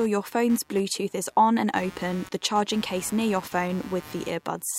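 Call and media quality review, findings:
Buzzy, chirping interference under the speech, whole clip, pulsing at around 150 Hz, roughly 20 dB below the speech. Computer activity noise: processor or graphics load shifting the shared audio ground, following machine activity, not the talker.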